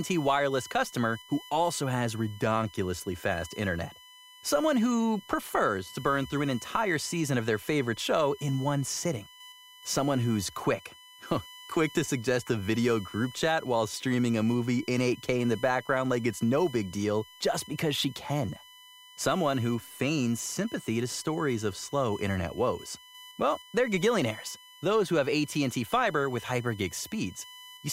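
Right through the speech there's USB whine, a steady fixed-pitch tone on 1 kHz with its loudest harmonic up at 3 kHz. It sits around 20 dB under the speech. That's the bus's 1 ms frame timing leaking in through power or ground.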